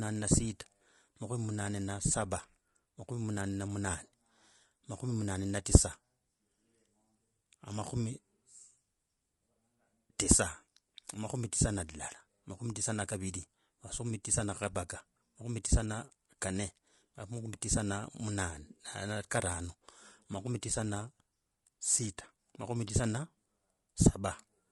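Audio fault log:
throughout: low-delay AAC compression, likely AAC-ELD at around 32 kbps; speech sounds plainly rough and grainy, with smeared spectrogram harmonics and noise filling the gaps between them.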